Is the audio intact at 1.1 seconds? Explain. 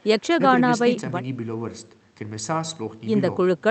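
Yes, the speech at 1.1 seconds comes through the call path intact, with no dropout, glitch or other fault at that moment.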